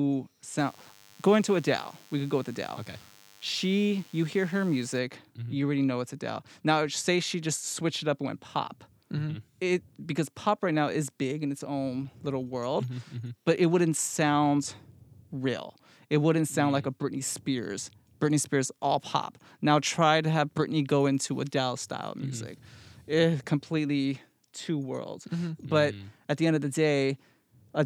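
From 0.58 s to 4.99 s, a DECT cordless phone buzz sits under the speech. A DECT handset or base nearby transmits a short radio burst every 10 ms. The audio circuit rectifies those bursts into sound. The result is a steady, thin buzz at 100 Hz, with many harmonics stacked above it. It sits well below the speech, roughly 30 dB down. It stops at 4.99 s.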